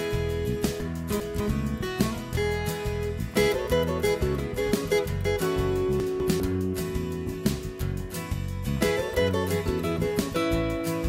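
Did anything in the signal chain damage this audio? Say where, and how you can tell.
Yes, there are chunks out of order, introduced at the buffer stage where audio is assembled in fixed blocks. Between 0.8 and 1.4 s a 200 ms block plays two blocks late, and between 6.0 and 6.4 s another plays one block late, each producing a jumbled moment with hard joins. Unlike a dropout or a stutter, nothing is missing or repeated. The same material simply arrives in the wrong order.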